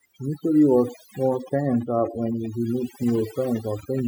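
It's a short speech recording, and from start to finish it's got overdone noise removal. The noise reducer was pushed too hard, so any frequency band sitting near its idea of the noise floor gets pulled right down or switched off, and the quieter parts of the voice get taken out along with it. That leaves the background in the gaps lowered and broken up into little twinkling specks. Then from about 0.88 s to 4.0 s there's a train of clicks, roughly 8.4 per second on average but spaced unevenly, something like thirty of them. They all have much the same shape and poke out about 10 dB above the speech, so you hear a ragged ticking on top of everything, pauses included. That kind of repeated pulse is likely interference from nearby gear or a faulty connection or power supply.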